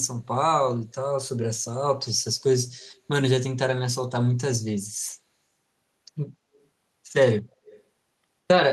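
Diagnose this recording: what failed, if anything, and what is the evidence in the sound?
Echo leak at 2.79 to 2.90 s, 6.54 to 6.66 s and 7.65 to 7.83 s, in call processing: short, faint delayed copies of the speech trail by 168 ms, then 236 ms, roughly 25 to 40 dB down, clearest in the last. The far-end echo canceller likely passed loudspeaker pickup back.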